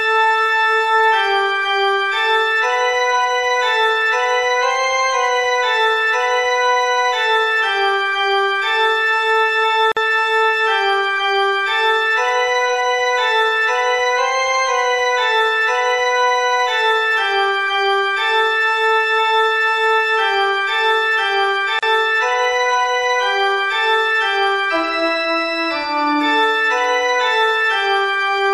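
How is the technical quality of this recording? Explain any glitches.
Two short dropouts spoil the continuity. At 9.92 s and 21.79 s there's a gap at a join of encoded pieces, roughly 49 ms and 36 ms long. Separately encoded chunks were spliced with their encoder delay and end padding left in, so the sound cuts out abruptly, smeared at the edges, then resumes exactly where it stopped.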